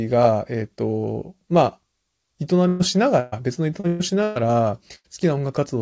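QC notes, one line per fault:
2.68–2.83, 3.20–3.35, 3.87–4.02, 4.23–4.38 and 4.95–5.07 s: burst of packet loss. Five gaps are each bridged by synthetic fill of 116, 125, 118, 121 and 88 ms. The receiver stretches the last sound and fades it out. A voiced sound turns into a held buzz, and anything else into a dying hiss. The speech then jumps ahead. About 120 ms of real audio is gone at each of the first four gaps and 80 ms at the last. Nothing drops to silence in the first four.
3.80–3.86 s: short concealed packet loss. About 40 ms of audio never arrived in time. The decoder covered the hole with 35 ms of continued sound, built from the last pitch or as shaped noise. It then blended back into the real signal. The result is a brief smear, just before the third burst. The G.722 call path at 64 kbps shows in the band-limited sound, with nothing above 8 kHz.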